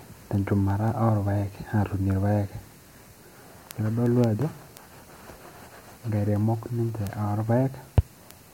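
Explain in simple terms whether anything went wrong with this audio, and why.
Something did go wrong. From 0.17 s to 8.48 s the speech carries word clock ticks: sharp ticks of uneven strength, about five per second, around fifty in all. Two digital devices were running on slightly different clocks, off by roughly 150 parts per million. At each slip a single sample was dropped or repeated. Random clicks would come at irregular moments, but these keep a steady beat.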